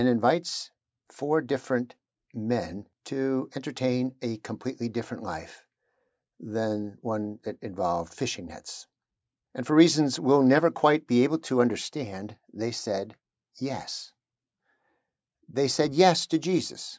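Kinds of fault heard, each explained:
Nothing here counts as a fault, since the trimmed-off deep bass and the top end stopping around 8 kHz are just what a call's microphone processing normally does to speech.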